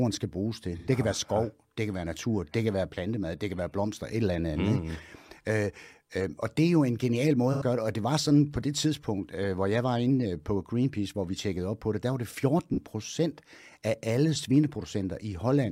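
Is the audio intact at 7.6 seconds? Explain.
No, 7.6 s sits right inside a stretch of AAC frame loss with concealment, running from about 7.52 to 7.62 s. That's roughly 85 ms, which fits about two lost AAC frames. The decoder had nothing real to play there, so it patched the gap by reusing the last good spectrum, scrambling or smoothing it to avoid an obvious click. With a gap that short, you hear a brief smeared, noisy or phasey blur in the speech rather than a dropout to silence.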